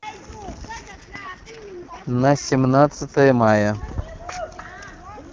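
From 0.91 to 3.47 s the speech turns raspy and synthetic, with no gap or narrowing: an AMR rate drop, consistent with AMR-WB's lowest 6.6 kbit/s mode.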